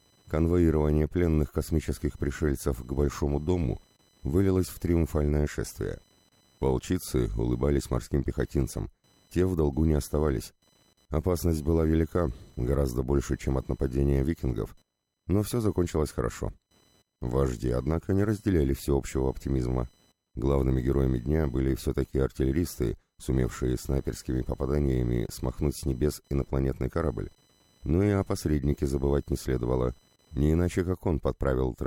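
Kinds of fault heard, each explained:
computer activity noise: the computer's changing load disturbs the audio circuit's shared ground, adding a faint buzz around a kilohertz, about 40 dB below the sound, throughout.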